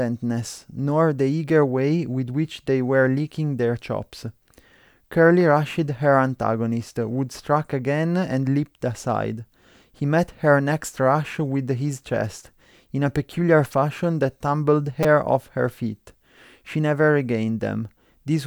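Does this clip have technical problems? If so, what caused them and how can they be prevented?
Yes. Twice, new audio failed to reach the output device in time, so it replayed its last buffer. This repeated buffer fault, with pieces about 5 ms long, plays once extra at 7.34 s as a click and four times extra from 15.03 to 15.05 s as a brief buzz. Larger buffers or higher audio-thread priority prevent it.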